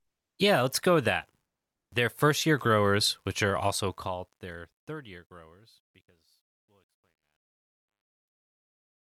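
A gain stage keeps too few bits with no dither, consistent with roughly 11-bit resolution, so from 3.62 s, just after "year growers which are", the fade-out shows truncation distortion: the speech grows gritty, worst from 5.56 s to 9.04 s.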